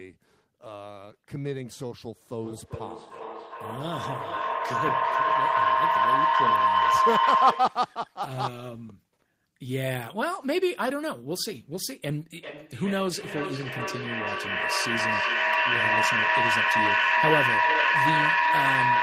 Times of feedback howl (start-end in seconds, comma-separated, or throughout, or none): 2.42-7.93, 12.35-19.03